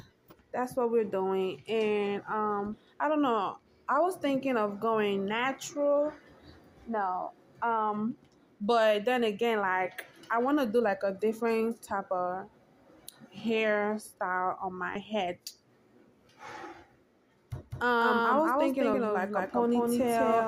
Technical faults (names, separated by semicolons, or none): compressed frames skipped; doubled audio track